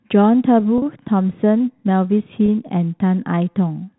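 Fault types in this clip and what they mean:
packet loss with pitch repetition: Short gaps at 0.78 s and 2.46 s, lasting 40 ms and 20 ms, are bridged by looping the last pitch period, giving a brief held buzz. A spectrogram shows frozen, flat harmonics, and the waveform shows identical repeating cycles.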